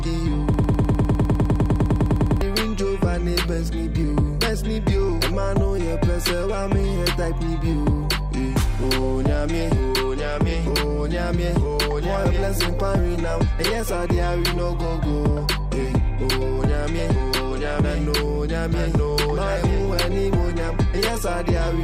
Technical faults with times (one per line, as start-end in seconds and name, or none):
0.54-2.41 broken-record loop